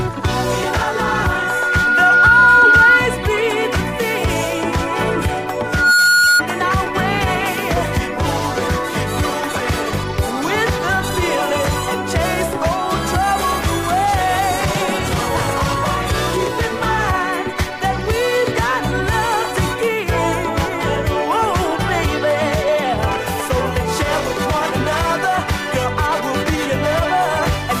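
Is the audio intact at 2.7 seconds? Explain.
No. At 2.7 s a loudspeaker feedback squeal is sounding, running from 0.37 to 3.10 s. The microphone re-captures its own loudspeaker, and at 1.4 kHz the loop gain passes unity, so that tone swells over about two seconds into a squeal roughly 10 dB above the programme.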